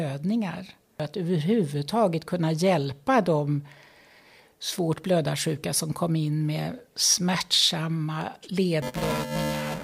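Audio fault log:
8.82–9.83 s, buffer tearing: the writer and reader of the playback ring buffer have slipped, so roughly a third of each period replays audio about 10 ms old, spliced with hard joins. This gives a robotic 375 Hz buzz, which fits a 128-sample buffer, heard only while sound plays. A spectrogram shows harmonic striping at 375 Hz spacing, and the waveform shows periodic discontinuities.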